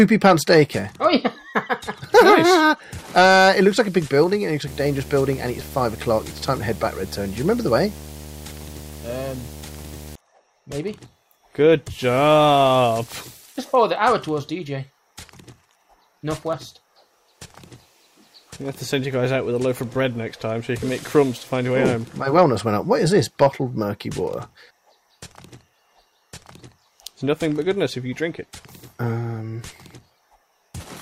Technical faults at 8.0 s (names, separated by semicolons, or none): video or display buzz